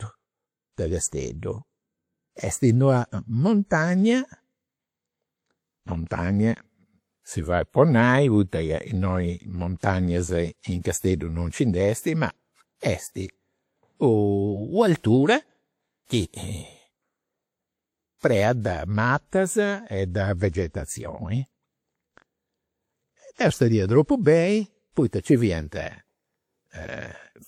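Speech clip with pre-echo at 16.05, 18.18 and 23.34 s: codec noise spreads about 50 ms ahead of attacks, showing as broadband haze before each onset on a spectrogram.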